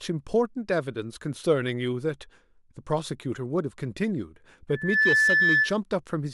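Loudspeaker feedback squeal, 4.69 to 5.77 s: the microphone hears its own loudspeaker, so a 1.7 kHz tone swells quickly to well above the speech.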